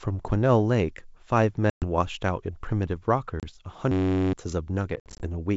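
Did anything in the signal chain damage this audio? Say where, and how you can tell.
Yes. Two stages damaged it: the network path of the call and the playback driver's buffering.

Packet loss on an ADPCM call affects three spots. There are hard-edged silent holes at 1.70 to 1.85 s (120 ms gone) and 3.40 to 3.44 s (30 ms), and a scattered cluster of dropouts between 4.96 and 5.26 s totalling 140 ms, with the longest gap 60 ms. Because ADPCM codes each sample as a change from a predicted value, the receiver's predictor and step size drift away from the sender's during each gap. The speech comes back slightly distorted before it settles.

A system hang loop runs from 3.92 to 4.33 s. The host or driver stalled while the sound hardware kept replaying the same 10.67 ms stretch of its ring buffer, which fits a 512-sample buffer. That piece repeats exactly 39 times. Repeated at 93.8 Hz, it turns into a steady buzz rather than a stutter, and roughly 0.4 s of real audio never arrives. 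The G.722 wideband coding underneath adds only faint upper-band hiss.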